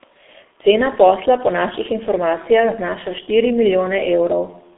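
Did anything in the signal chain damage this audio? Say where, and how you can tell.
Yes, at the codec stage, and it runs the whole way through. What you're hearing is the G.723.1 codec: the sound is muffled, with nothing above about 3.8 kHz and a narrow band of roughly 250 Hz to 3.6 kHz. It's hoarse, and consonants smear together. That fits a very low rate around 6 kbit/s, where a coarse voice model is updated only every 30 ms frame, so fast detail gets averaged away and the damage is heavy.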